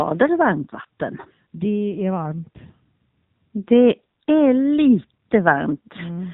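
From start to finish the speech carries the sound of the AMR narrowband mobile codec. The signal has been squeezed into an 8 kHz-sampled telephone band, so nothing above 4 kHz survives, and the voice is rebuilt from a vocal-tract model excited by a handful of pulses per 5 ms subframe. The damage is plainly audible: a buzzy, synthetic edge on every syllable, which fits one of the lower AMR-NB modes, around 7.4 kbps.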